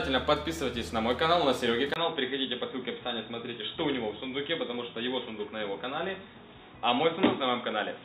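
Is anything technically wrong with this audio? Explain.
Yes. From 1.94 s the input likely switched to a poorer device: after a 20 ms gap, nothing passes above 3.8 kHz, the level drops about 5 dB, and a new noise floor sits well below the signal.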